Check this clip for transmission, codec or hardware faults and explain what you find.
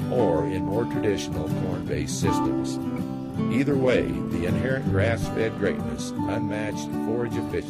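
Nothing wrong turns up here; the audio holds together the whole way with nothing that points to trouble in the transmission, the codec or the hardware.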